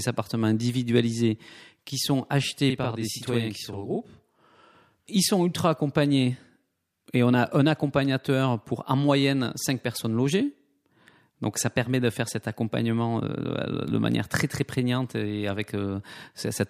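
From 2.70 to 4.75 s the speech shows channel delay (doubling): one channel runs about 43 ms late, which fits a 2048-sample buffer, and the mono sum hears both copies as an equal-level slap. On a spectrogram, comb-like notches appear; the waveform shows every onset twice.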